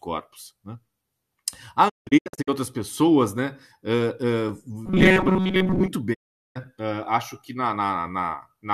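From 1.88 to 2.49 s there's a digital broadcast dropout. The receiver keeps losing frames and muting, with quick 20 ms fades, leaving several holes (longest 168 ms, about 384 ms gone in total) before "outras pessoas né" comes back.

From 4.86 to 5.88 s the speech turns into a stiff, metallic 188 Hz buzz that still roughly tracks the talking. It's likely robotic sound from repeated short buffers: around 5 ms chunks looping while most of the real audio gets skipped.

A second dropout runs from 6.13 to 6.57 s. It's one clean 408 ms mute with short fades before "acho que na".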